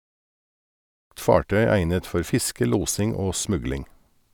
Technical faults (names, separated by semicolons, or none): none